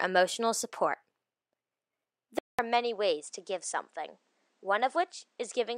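At 2.39 s the speech drops out for 200 ms. It returns duller, with nothing above 9.8 kHz, about 5 dB quieter, and over a new faint noise floor. This is likely an input switched to a poorer device, lasting until the end.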